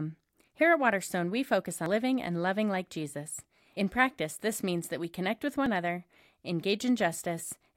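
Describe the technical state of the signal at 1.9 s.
Audio missing between chunks at 1.86 s: the speech skips forward abruptly, with about a tenth of a second gone and the two sides butted together without silence. The likely cause is a recorder working in 2-second chunks dropping audio at the changeover.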